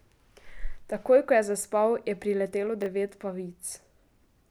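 At 2.82 to 2.86 s the speech has a brief chunks-out-of-order fault. One 20 ms chunk arrived or was written one slot late, so it plays after the chunk that should follow it. No audio is missing, but the sequence is swapped, producing a tiny jumbled stutter. On a waveform, three hard joins appear across those 40 ms as abrupt steps. A spectrogram shows thin vertical broadband lines at each join, with the harmonics jumping discontinuously.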